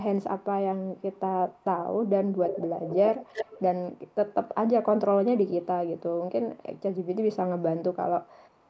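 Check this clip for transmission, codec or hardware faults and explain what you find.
An echo leak recurs through the clip: 0.97–1.19, 1.49–1.64, 2.47–3.61, 4.07–4.34, 5.48–5.66, 8.26–8.30 and 8.46–8.70 s. A copy of the speech returns 264 ms late, likely from the far end's loudspeaker reaching its microphone past an incomplete echo canceller. It is faint except at 5.48–5.66 s, where it is about 20 dB below the speech, and at 2.47–3.61 s, where it nearly matches the speech. Unlike room reverberation, the copy arrives as a distinct repeat at a fixed delay in scraps and longer stretches rather than as a smooth decaying tail.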